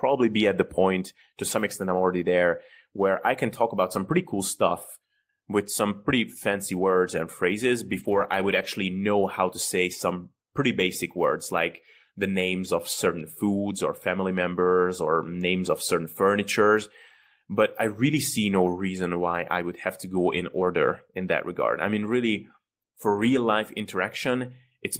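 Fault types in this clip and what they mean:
Lost packet rebuilt from error correction: some packets went missing, but the next packet carried a low-bitrate backup copy, so the decoder filled the holes with no gaps. You hear six short rough, noisier patches instead, the longest running about 380 ms from 7.91 to 8.65 s.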